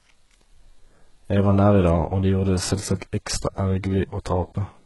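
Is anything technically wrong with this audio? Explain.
Yes. HE-AAC compression damages the speech throughout the clip. The sound is likely HE-AAC coded, at a very low bitrate consistent with about 12 kbps. Only the lower spectrum is properly coded, and the treble is rebuilt by copying lower bands upward under a coarse envelope, with nothing above 11.5 kHz. The damage is heavy. The top end sounds synthetic, its harmonics misaligned with those below, so sibilants come out gritty, metallic or lispy.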